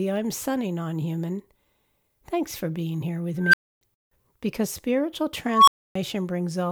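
At 3.42 s and 5.49 s an unstable filter, its feedback growing unchecked, swells a squeal (roughly 1.5 kHz, then 1 kHz) over 115 and 186 ms. It clips to a flat-topped waveform and a bright spectrogram line, then overflows into about 279 ms of silence.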